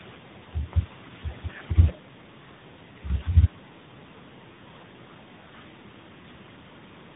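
From start to finish the speech shows tandem speech coding. It passed through an AMR-NB coder, then G.711, then CVSD, each re-coding the previous stage's damage. It sounds rough, muffled and warbly. A spectrogram shows nothing above 3.8 kHz and smeared, grainy harmonics.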